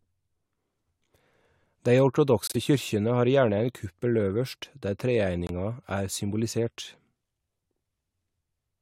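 At 2.47 s the speech cuts abruptly to silence for 0.09 s, about three frame lengths, and again at 5.47 s for 0.04 s. Each is a corrupt frame muted: the decoder rejected damaged frames and the player inserted silence. Unlike concealment, nothing is filled in, and unlike a skip, timing holds.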